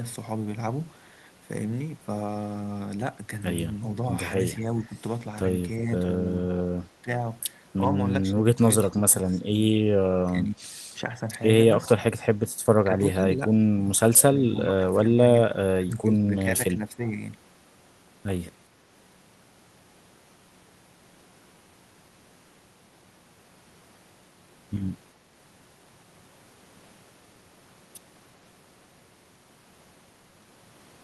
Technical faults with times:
3.95-4.01 speech suppressed in double talk
4.66-4.96 speech suppressed in double talk
6.90-7.10 speech suppressed in double talk
8.88-9.49 speech suppressed in double talk
10.26-11.28 speech suppressed in double talk
12.84-17.20 speech suppressed in double talk

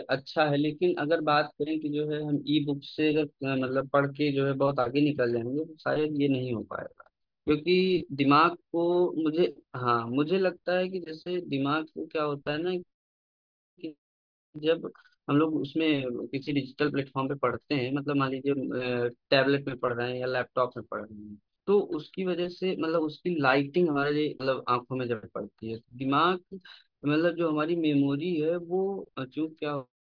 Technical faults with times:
none

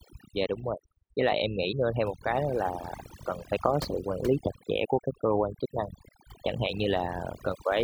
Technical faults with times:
0.00-7.84 overdone noise removal

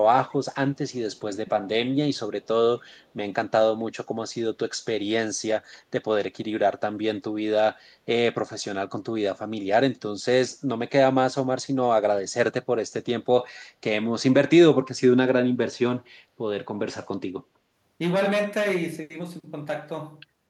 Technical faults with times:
0.31-0.36 echo leak

